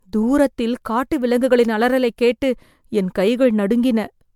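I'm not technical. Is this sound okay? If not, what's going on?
No. Throughout, the speech sounds swirly, smeared and hollow, with blurred edges. That's generation loss, likely from the audio being compressed as MP3 around seven times over.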